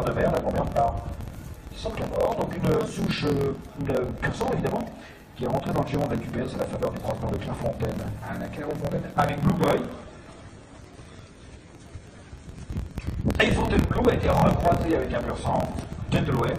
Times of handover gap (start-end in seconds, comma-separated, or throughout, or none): none